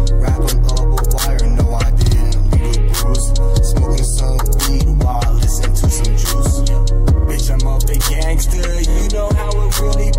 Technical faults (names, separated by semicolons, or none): repeated frames